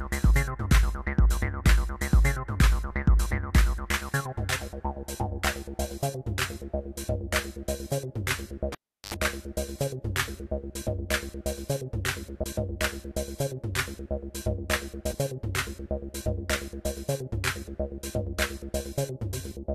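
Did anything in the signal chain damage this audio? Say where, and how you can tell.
Yes. The analogue wiring was disturbed: a cable pulled and plugged in from 8.72 to 9.14 s. A pop opens about 0.37 s of near silence, then 77 ms of 50 Hz mains buzz as only the tip touches, and a second pop. On a spectrogram, two broadband vertical lines bracket a gap ending in stacked 50 Hz harmonics.

Damaged data in a compressed stream at the decode stage causes brief blips at 12.43 s and 15.12 s. Corrupted frames there make the decoder misread them and lose sync before it recovers. Each appears as a tiny smeared block on the spectrogram.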